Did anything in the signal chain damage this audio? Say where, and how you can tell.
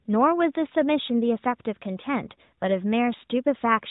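No, nothing in the chain audibly damaged this speech; the audio sits within a narrowband mobile channel with nothing above 4 kHz, as expected from an AMR-NB path at a high-rate mode such as 12.2 kbps, and shows no dropout, clipping or discontinuity at any point.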